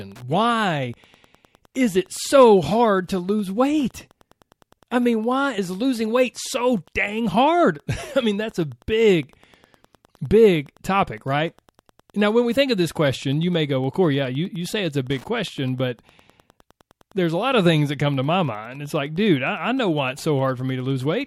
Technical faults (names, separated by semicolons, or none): Wi-Fi interference